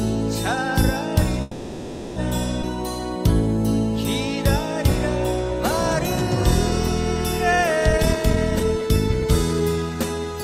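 From 1.41 to 2.18 s the audio stalls into a 0.75 s decaying continuation, then resumes intact; this call audio freeze likely comes from delayed packets draining the jitter buffer. At 2.62 to 2.65 s a skip ahead drops roughly a third of a second, splicing both sides almost directly, as audio is dropped while later audio is already waiting. From 7.92 to 10.14 s a jitter buffer speed-up plays material at 120 % speed with unchanged pitch, trimming about half a second of excess buffered audio through repeated pitch-period removals.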